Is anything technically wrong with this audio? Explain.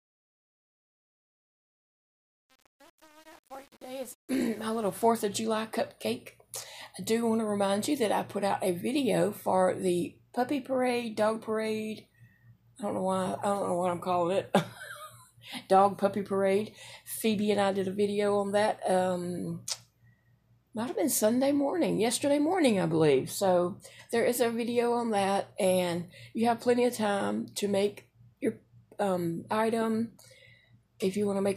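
Yes. Truncation distortion on a fade affects the fade-in from 0.0 to 5.05 s. The gain stage keeps only about 7 bits and adds no dither. As the level rises from near zero, the waveform moves in coarse square steps. The quiet start sounds gritty.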